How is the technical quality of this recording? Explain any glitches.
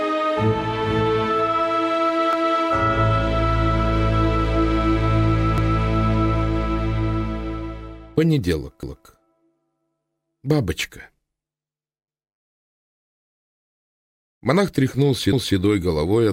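The recording has a recurring join fault: overlapping chunks. At 2.33, 5.58, 8.83 and 15.33 s, a 250 ms stretch of sound plays twice, because each 3-second chunk starts a quarter-second before the previous one ended. It is heard as a brief stutter or click at each seam. On a waveform, the same 0.25 s shape appears twice back to back; on a spectrogram, a short block of identical patterns repeats, often with a vertical edge at the join.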